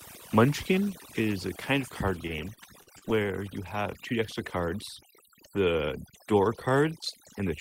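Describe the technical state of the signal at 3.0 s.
At 3.0 s the signal is inside a burst of repeated packet loss (robotic sound) running from 2.27 to 3.08 s. Packets repeatedly failed to arrive in time, and each hole was bridged by extending the preceding sound. About 100 ms is missing, the longest hole near 39 ms, so the audio comes out choppy and robotic.

Overdone noise removal is also active here, as across the whole clip. The suppressor was set too aggressively, switching off individual frequency bands whenever they sat close to its noise estimate and taking softer parts of the speech with them. The background drops and breaks up into twinkling, warbling specks.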